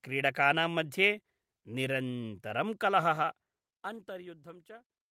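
Listening through the speech, nothing stood out as a technical problem.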